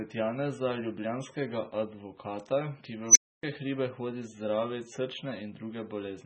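Throughout, the speech sounds watery and swirly, with metallic, chirpy s sounds, smeared onsets and nothing above 10.5 kHz. The likely cause is heavy MP3 compression at a level that fits roughly 16 kbps. Unlike a plain low-pass cut, the remaining detail flickers from frame to frame.

At 3.09 s, after "ljubljanskega advokata ki", an unstable filter runs away. A squeal around 7 kHz swells to clipping within 67 ms, then silence follows for 280 ms, until "hribe hodi zdravit". That sudden cut-out sets it apart from acoustic feedback howl.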